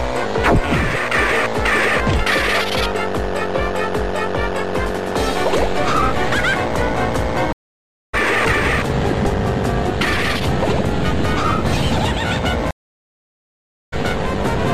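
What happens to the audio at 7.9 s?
At 7.9 s the audio is in the middle of a stream reconnect running from 7.53 to 8.15 s. The connection dropped, so playback goes silent for about 0.61 s while the player re-establishes the link and starts a new decoder partway through the stream. When sound returns it has skipped ahead by roughly half a second. The content that would have played during that time never appears, so the sound jumps forward instead of picking up where it stopped.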